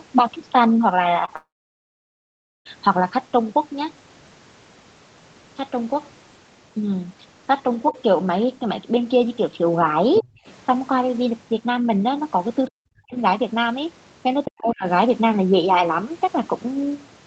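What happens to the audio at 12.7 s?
The speech drops sharply from 12.70 to 13.17 s, falling by around 40 dB in places and almost cutting out. This is likely speech suppressed in double talk. The echo canceller mistook the talker for loudspeaker echo while both sides spoke, and turned everything down.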